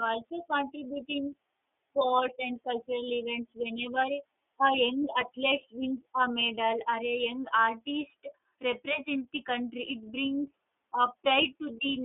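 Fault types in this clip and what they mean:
iLBC codec: The speech was sent through the iLBC narrowband VoIP codec, which codes the excitation of each 30 ms frame independently instead of building on the previous frame. The result fits its 13.33 kbps mode. Only about 250 Hz to 3.6 kHz gets through, so the speech sounds thin and boxy with no upper brightness. The coding also leaves a plainly audible rough, slightly synthetic grain throughout.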